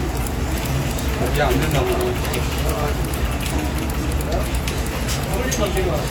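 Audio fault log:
Nothing to log here: these sounds come through without a single problem worth flagging.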